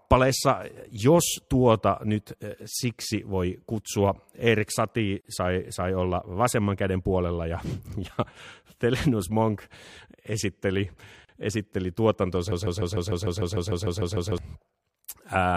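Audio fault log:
5.21–5.25 s and 11.25–11.29 s, gap at a join of encoded pieces: silences of 43 ms and 37 ms, six seconds apart, from untrimmed encoder delay and padding.
12.52–14.38 s, broken-record loop: a 150 ms fragment repeats twelve times back to back. Likely a stalled stream resending its last fragment. The intended audio is lost.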